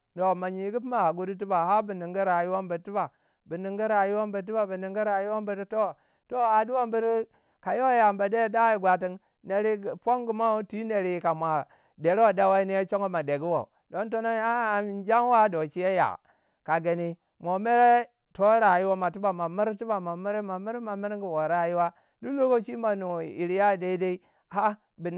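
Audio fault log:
Nothing's amiss here; the speech simply comes over the call line with nothing above 4 kHz, which is just what a G.711 A-law link at 64 kbps gives you.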